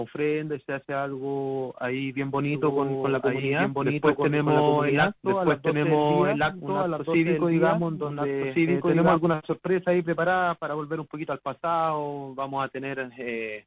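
From 2.54 s to 9.16 s, an equally loud, dry second copy trails roughly one and a half seconds behind; a doubled audio track, likely from a slower second capture path.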